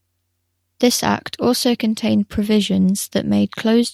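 Nothing stood out on listening to this speech recording.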